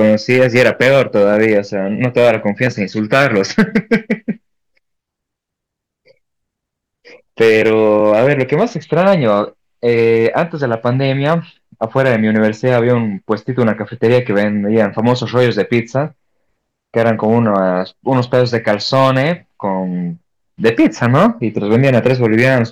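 Hard clipping runs through the whole speech clip: peaks drive about 8 dB past the limit, so a small share get flattened, adding a gritty crackle on loud syllables.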